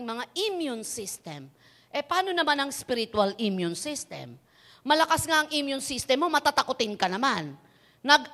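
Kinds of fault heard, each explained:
No kind of fault can be heard in the speech here. There is nothing to list for it.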